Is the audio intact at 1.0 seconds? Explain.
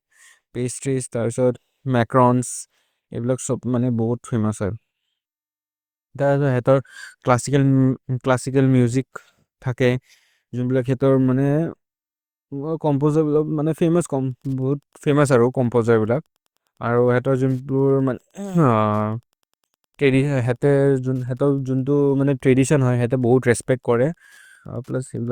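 Yes, the speech at 1.0 seconds is intact, with no fault at that moment.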